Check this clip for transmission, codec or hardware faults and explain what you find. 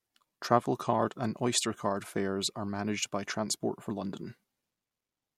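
No fault can be heard anywhere in the speech. There is nothing to report and no event to place in time.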